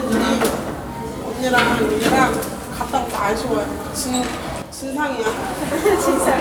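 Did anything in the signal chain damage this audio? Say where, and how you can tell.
Yes, there's a sudden gain jump from 4.62 to 5.26 s. Sound and background both drop about 7 dB instantly, likely an unramped digital gain change.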